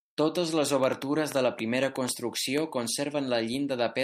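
From 0.84 s to 2.59 s, a train of clicks ticks over the speech, roughly ten sharp pops of much the same shape arriving at an uneven pace of about 5.2 per second. They stand out strongly, peaking around 10 dB above the speech, and they carry on through the pauses as well. Pulses repeating like this most likely come from interference from nearby equipment or from a faulty connection or power supply.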